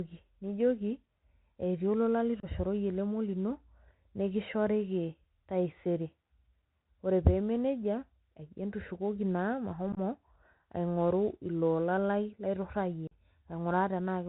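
Throughout, the speech carries a Bluetooth CVSD headset codec: a 64 kbps one-bit delta coder tracking the waveform with an adaptive step. Nothing above 4 kHz survives, sibilants turn scratchy, loud bright sounds slur where the step cannot keep up, and granular hiss sits underneath.

Unconcealed Bluetooth headset packet loss then punches abrupt holes: after "etii olola" at 2.40–2.45 s (about 30 ms missing), at 9.92–9.99 s as scattered gaps totalling 34 ms over 45 ms, and after "iloola lai laitorrayie" at 13.07–13.12 s (41 ms).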